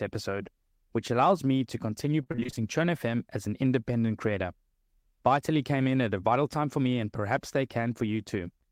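Speech, with repeated packet loss (robotic sound) from 2.23 to 2.58 s. Short dropouts, the longest about 24 ms, are each patched by repeating the preceding audio, so about half that stretch is concealed. The result sounds choppy, with pieces missing. A spectrogram shows smeared, repeated harmonic slices, and the waveform shows copied cycles.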